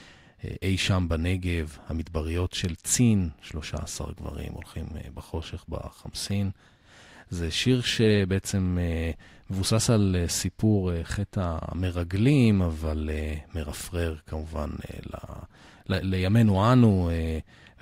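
From start to finish the speech carries periodic clock jitter: the converter's sample clock is being wobbled at around 100 Hz, so every component of the voice gains sidebands roughly 100 Hz above and below it, strongest on sibilants and upper harmonics. The result is a rough, metallic edge. Unlike mains hum at a similar rate, it adds no steady tone of its own and disappears in the pauses between phrases.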